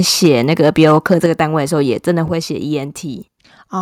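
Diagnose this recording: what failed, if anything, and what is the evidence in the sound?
The converter stage failed first: microphone overload, most likely from an input volume set too high, drove the peaks of the speech past full scale from 0.24 to 1.41 s. The loudest syllables push about 5 dB beyond the converter's limit, so their tops are sheared flat on a small share of samples, and that flattening shows up as a harsh, crackling edge on the strongest moments.

The call processing then reacted with microphone volume stepped down: the device's input gain was cut in single steps, likely by automatic level control responding to the clipping. The speech and the background drop together, abruptly, by about 2 dB at 0.26 s, about 5 dB at 1.26 s and about 4 dB at 2.28 s. Each step is a sudden fall in loudness rather than a smooth fade, and the first two land inside the distorted stretch.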